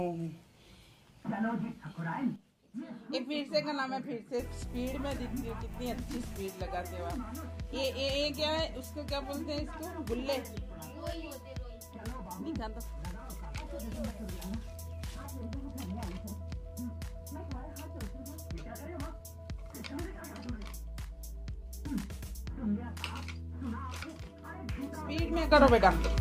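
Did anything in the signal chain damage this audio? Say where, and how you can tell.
No, nothing in the signal chain audibly damaged this audio. No stage, from wiring to playback, leaves a mark that can be heard in the sound.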